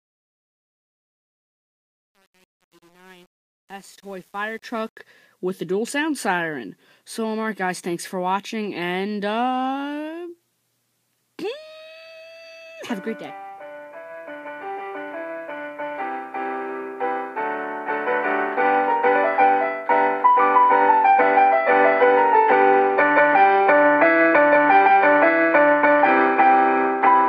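The fade-in at the start of the audio sounds gritty. From 0.0 to about 4.4 s the quiet sound is at its grittiest, and it only smooths out as the level nears full by 4.99 s. This is truncation distortion on a fade. The gain stage behind the fade-in kept too few bits without dither, which fits an 8-bit path, so the low-level waveform collapsed into coarse square steps.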